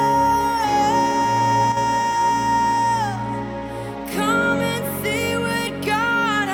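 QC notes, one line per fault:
1.72–1.77 s, one channel drops out: for about 50 ms the level falls abruptly by about 6 dB and then snaps back, a short dip rather than a click. The likely cause is one stereo channel briefly going silent before the mono sum, so material common to both sides loses half its contribution and anything present only on the lost side vanishes. On a waveform this shows as a sudden halving of amplitude with square edges; a spectrogram shows a thin, uniformly dimmer vertical band.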